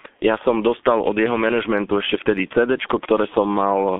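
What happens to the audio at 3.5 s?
At 3.5 s the speech is still passing through the G.723.1 codec, which runs the whole clip. The sound fits a rate near 6 kbit/s in 30 ms frames and is confined to 150 Hz to 3.5 kHz, so it is muffled and hoarse with heavily smeared consonants.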